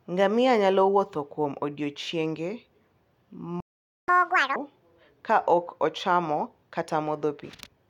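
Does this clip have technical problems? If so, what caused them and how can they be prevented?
Yes. From 3.60 to 4.08 s the speech drops into silence for about half a second, a playback stall, likely because the player ran out of buffered data or its thread was blocked. From 4.08 to 4.56 s the speech rushes at double speed and sounds nearly an octave higher, a catch-up at higher speed, as the player resamples its backlog to regain the lost time. A larger playback buffer and a thread that nothing else can block would prevent the stall, and with it the catch-up.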